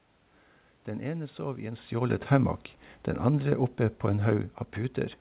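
Nothing in this speech recording goes wrong: the room noise and the change in level around 1.5 s as the talker shifts position are just part of the recording, and the narrow telephone-style sound with nothing above 4 kHz is simply what a G.711 call line does.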